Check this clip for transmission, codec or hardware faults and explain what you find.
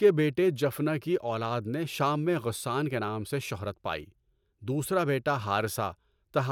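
Nothing stood out on listening to this speech recording.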